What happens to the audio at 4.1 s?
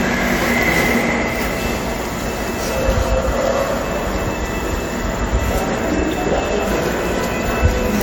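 A receiving device running on its own clock, not locked to the sender's digital link, slips against it by roughly 20 parts per million. At each slip a single sample is dropped or repeated, producing the word clock ticks: sharp, uneven clicks about once per second from 0.17 s to 7.43 s, roughly seven in all. The moment at 4.1 s lies within this stretch of ticking.

Underneath, the same moment carries generation loss. Its likely cause is the audio being re-encoded repeatedly, perhaps around seven times, with a lossy codec of the AAC-LC kind at about 96 kbit/s. Each pass quantises on a shifted frame grid, so noise and spectral gaps accumulate. The result is a swirly, hollow, smeared texture with softened attacks, worse than a single encode at that rate would give.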